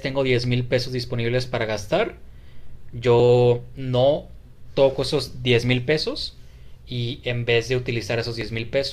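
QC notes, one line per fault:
1.46–8.41 s, clock drift buffer slips: a short click recurs every 1.74 s, about five in all, each a small discontinuity where a block of several dozen samples is skipped or repeated. The likely cause is two unsynchronised clocks differing by several hundred ppm.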